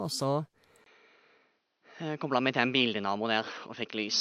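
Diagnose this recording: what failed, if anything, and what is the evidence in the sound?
At 0.84 s the audio drops out for about 20 ms, then continues to the end with nothing above 6.2 kHz, a new noise floor around 50 dB down and no level change. This points to an input switched to a poorer device at the driver level, likely a narrower-band microphone taking over.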